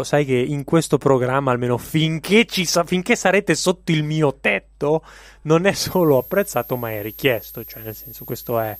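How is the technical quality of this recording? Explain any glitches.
The speech carries one clear fault. A switching supply whistle enters at 5.82 s, just after "mio tetto non è", and runs until the end: a switching power supply running in audible burst mode or beating with another leaks a thin tone around 12.8 kHz, roughly 20 dB below the speech, wavering slightly in pitch.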